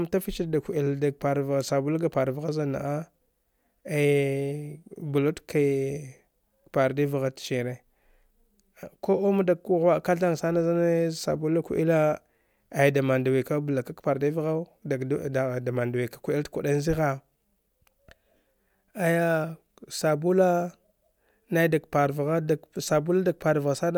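Nothing goes wrong anywhere in this recording, so there's simply no fault to point to at any moment along the way.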